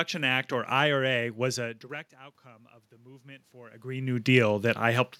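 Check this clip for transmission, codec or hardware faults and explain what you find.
One fault stands out: automatic gain rising, from 1.52 to 4.03 s. The input level drops by about 23 dB, likely from the talker moving back around 1.5 s. The automatic gain control responds by slowly adding about 7 dB. Voice and room noise swell together over those two and a half seconds.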